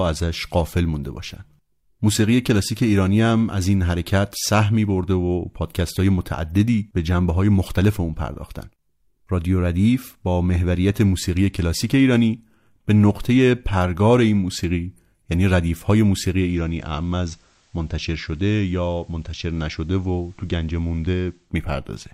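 At 16.33 s the sound cross-fades over about 280 ms from the digital stream to the FM analogue broadcast of the same station. This is digital radio blending to analogue, and it lasts until 21.55 s. The receiver lost the digital signal and fell back to the analogue one. A faint hiss rises, roughly 40 dB below the signal. The level drops by about 2 dB. On a spectrogram, a thin noise floor appears across that span. The waveform steps down slightly.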